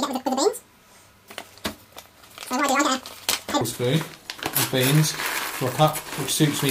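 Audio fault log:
0.00–3.61 s, audio read two samples at a time (double speed): samples got taken in pairs as single frames, so everything races at 2x and sits a full octave high.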